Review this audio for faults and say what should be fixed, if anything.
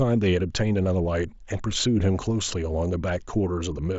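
Nothing here needs fixing: the speech comes over a Bluetooth mSBC headset link with its content topping out around 7.7 kHz, which is just how that link sounds.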